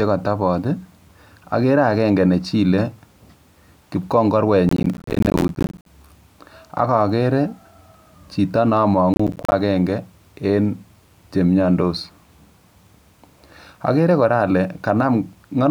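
Speech carries two bursts of processor overload crackle, from 4.69 to 5.86 s and again from 9.14 to 9.52 s. The processor fell behind and missed a long run of audio buffer deadlines, and each missed buffer left a short hole of silence with hard edges. The gaps point to buffers of around 10 ms. On the waveform, both stretches show many flat dropouts. On a spectrogram, thin vertical broadband streaks appear at every gap.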